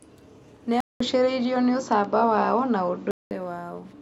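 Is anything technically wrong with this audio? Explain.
Yes. From 0.80 s to 3.31 s the speech turns duller and a bit boxier, then clears up again, which sounds like an input switched to a poorer device, likely a different mic or a headset's call profile. There's a short gap of about 200 ms at the switch, the level shifts by a few decibels, nothing comes through above 7.6 kHz, and faint new background noise sits well under the speech until the better input returns.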